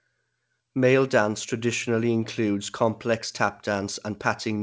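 Throughout the speech, clock drift between sender and receiver leaves the sender's clock about 1.5 percent slow, so the jitter buffer keeps draining, unlike random network jitter, which wanders both ways. From 0.04 to 4.49 s, repeated timing corrections stretch the audio to about 99 percent speed, adding roughly 70 ms, and if heard at all come through as faint uneven hiccups, over a G.722-style band that stops at 8 kHz.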